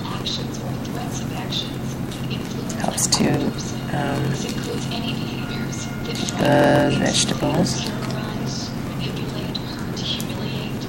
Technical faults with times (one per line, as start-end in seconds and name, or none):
0.00-10.88 block size mismatch (padded)